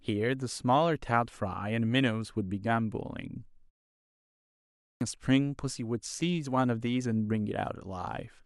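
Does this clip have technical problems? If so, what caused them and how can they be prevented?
Yes. A clipped start after a pause occurs at 4.49 s: during the preceding 0.87 s of silence the output device dropped into a sleep state, and when speech resumed it needed time to wake and lock onto the stream again. About 0.52 s of audio was lost, up to 5.01 s, so the speech bursts in abruptly out of silence with its opening sounds missing. Keeping the output path active through silences, by disabling device power-saving, prevents this.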